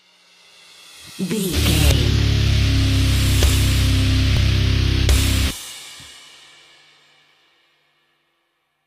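At 4.37 s and again at 6.35 s, a small skip is heard. Each is an overlap between stream segments. Two segments claimed the same time, so about 25 ms was trimmed away. The waveform jumps. The 2 s spacing fits 2 s segments.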